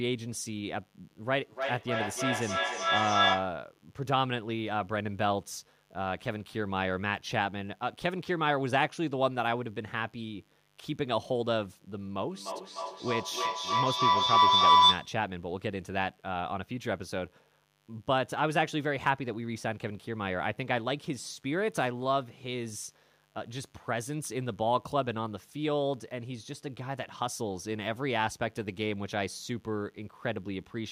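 A steady, raspy buzz sits under the speech from start to finish, roughly 35 dB below it. This is mains buzz at 50 Hz. Sharp switching spikes, as from a dimmer, a rectifier or a missing shield, get into the signal twice in every mains cycle. That spreads energy into harmonics well above 50 Hz, which gives the buzz its edge rather than a smooth hum.

From 1.26 to 3.64 s the speech comes back round at a fixed interval of about a third of a second. Each repeat sounds thinner and more ringing than the one before. The repeats pile up rather than dying away and peak about 3 dB above the speech. This is feedback echo between two devices. Two devices in the same room are on the same call. One plays back what the other's microphone sent, and that microphone picks it up again. Neither echo canceller removes it, because each only cancels what its own device plays.

From 12.3 to 15.2 s the same loop runs away into a feedback howl. 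A tone around 1 kHz swells to about 10 dB above the speech and pulses at roughly the same third-of-a-second interval. Each trip from microphone to loudspeaker and back adds level, so the sound narrows to the frequency the loop favours and keeps building until the loop is broken.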